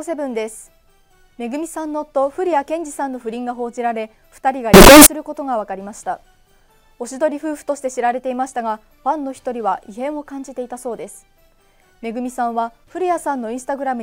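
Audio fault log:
4.74–5.06 s, signed and unsigned mixed up: a sudden blast of harsh, very loud distortion where even quiet moments are as loud as the peaks. Likely the top bit of each 16-bit sample was misread, so every zero crossing jumps across the entire range.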